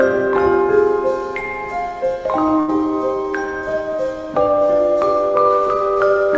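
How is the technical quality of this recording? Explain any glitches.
One short dropout stands out against a band-limited call sound with nothing above 8 kHz, which fits a wideband call codec such as G.722. Burst of packet loss, 2.60 to 2.70 s: consecutive packets never arrived in time, so the receiver stretched the last received sound for about 80 ms while fading it down. This gives a brief held buzz or fading hiss, and then the audio jumps ahead with roughly 80 ms lost.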